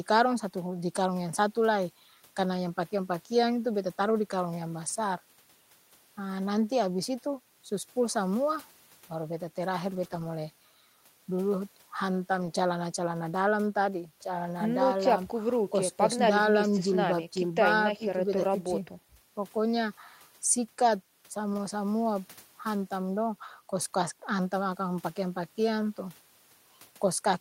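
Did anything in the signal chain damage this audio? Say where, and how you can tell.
Yes. At the network stage, packets were dropped and the Opus decoder rebuilt them from the low-bitrate copies carried in the following packets (lost packets rebuilt from error correction). Speech roughens and turns noisy, without gaps, at 9.95–10.05 s, 10.11–10.25 s, 12.37–12.47 s and 21.53–21.59 s.

Also at the network stage, about 20 ms of audio arrived too late for the decoder, causing a short concealed packet loss at 10.07–10.11 s. The receiver extended the preceding sound to fill the hole and then blended back, which is heard as a brief smear between the two rebuilt stretches.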